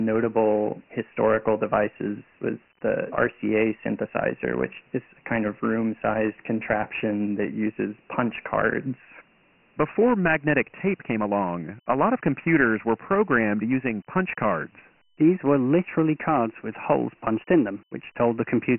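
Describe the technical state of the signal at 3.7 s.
At 3.7 s the speech carries Dialogic VOX ADPCM throughout: coarse 4-bit steps, which fit 6,000 samples a second, leave gritty hiss trailing the speech and nothing above 3 kHz.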